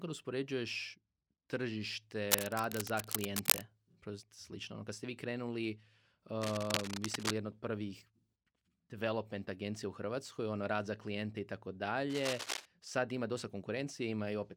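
Cable scratch noise appears three times in this speech clip: from 2.26 to 3.67 s, from 6.41 to 7.33 s just before "jedna od prvih", and from 12.10 to 12.66 s between "za klijente i tako" and "sad ima dosta". Each is a dense, ragged rustle laid over the voice. The first two sit roughly level with the speech and the last a little below it. The likely cause is a worn cable or connector being moved, making its contact resistance flicker.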